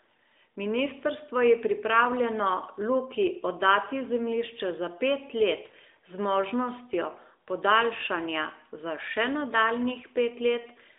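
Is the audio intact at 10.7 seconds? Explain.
No, lost AMR speech frames hit from 10.62 to 10.69 s, a 40 ms gap that fits two 20 ms frames. The decoder repeats its last good pitch and vocal-tract settings at falling gain, leaving a brief dip or warble before weak, rough recovery.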